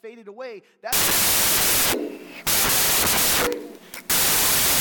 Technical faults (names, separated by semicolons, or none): wrong sample width